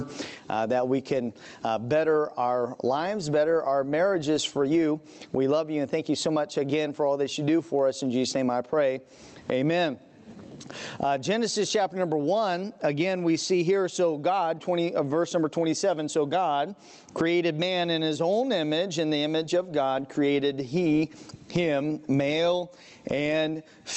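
Gain pumping runs throughout the clip. The level swings by roughly 25 dB, so loud and soft passages sit squashed close together. The likely cause is input gain set far too high, with a fast limiter or compressor clamping down on each peak. The audio has also passed through an Opus call path at around 32 kbps whose top end stops near 8 kHz.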